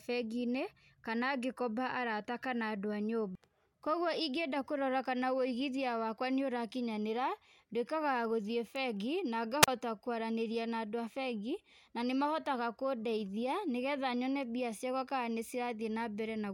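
At 9.62 s the speech breaks up in a wireless microphone squelch dropout lasting until about 9.68 s. The radio link from an analogue FM transmitter fades, and the receiver's squelch mutes the output for about 37 ms. A brief burst of hiss comes first, then near silence before the speech returns. On a waveform this appears as a short flat gap. On a spectrogram it shows as a thin band of broadband noise followed by an almost empty vertical strip.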